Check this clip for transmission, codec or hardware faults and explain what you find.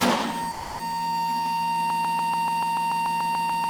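Two faults can be heard.

From 0.51 to 0.79 s, the sound is dropped by the voice detector. For 280 ms it gives way to steady comfort noise, likely because a discontinuous-transmission scheme such as Opus DTX judged the sound to be background. Packet-loss concealment would smear or echo what came before. Here the fill is flat, featureless noise.

From 1.90 s to the end, a broken-record loop takes over. A fragment of about 145 ms repeats exactly, back to back, most likely because the stream stalled while its last buffer kept replaying. A brief stutter would soon move on. This repeats identically and never recovers, so the rest of the sound is lost.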